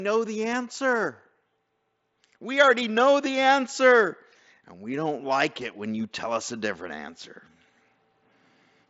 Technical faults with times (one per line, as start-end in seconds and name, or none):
none